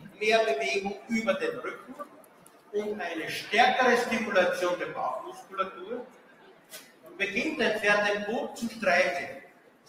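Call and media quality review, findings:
Noise suppressor applied to music or sounds, throughout: speech-tuned suppression pumps the level by roughly 15 dB. Attacks pass while sustained tones and tails sink, unlike the even loss of a plain gain drop.

Sound cut by the noise suppressor at 0.00–0.21 s, 0.94–1.11 s, 1.68–2.74 s, 5.22–7.20 s and 9.37 s to the end: held or decaying sound is treated as noise and pulled down by about 11–14 dB. These are dips and truncated decays, not dropouts to silence.

Short concealed packet loss at 7.79–7.83 s: 20 ms failed to reach the decoder, and the receiver extrapolated the preceding sound before blending back. This gives a brief smear rather than a click or a gap.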